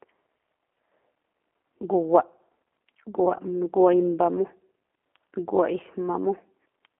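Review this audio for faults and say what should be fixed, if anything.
The whole clip carries G.729 codec damage: the speech is rough and synthetic and stops dead around 3.8 kHz, which fits an 8 kbit/s G.729A stream. Capture or route the call through a wideband codec such as G.722 or Opus instead.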